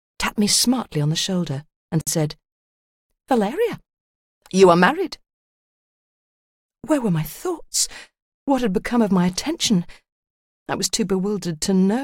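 At 2.01 s, and again every 4.0 s, a 58 ms silence opens: a gap at a join of encoded pieces. Separately encoded segments were butted together with encoder delay and last-frame padding left in. Unlike a dropout, nothing is lost, and the sound resumes where it stopped.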